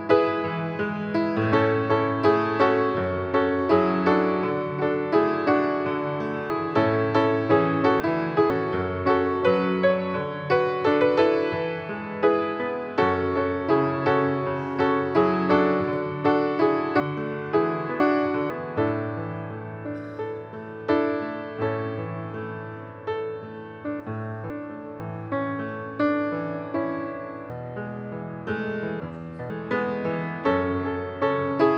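Jumbled stretches occur at 6.5–8.5 s, 17.0–18.5 s, 24.0–25.0 s and 27.5–29.5 s. These are chunks out of order: a 0.5 s block arrives late and plays after the one, two or three blocks that should follow it, so the sound is reshuffled rather than lost.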